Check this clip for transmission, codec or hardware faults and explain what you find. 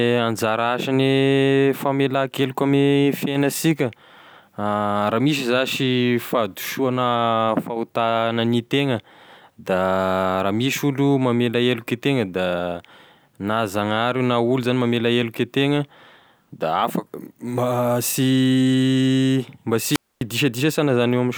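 One hardware fault appears, a wireless microphone squelch dropout from 19.89 to 20.21 s. The radio link fades, hiss rises, and the receiver's squelch mutes speech for 254 ms.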